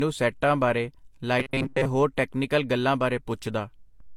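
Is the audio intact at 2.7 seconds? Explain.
No, at 2.7 seconds the speech carries the layered artefacts of transcoding between lossy codecs, present throughout. It's likely HE-AAC then Vorbis, each adding its own damage on top of the last, with the lowest cut-off in the chain remaining.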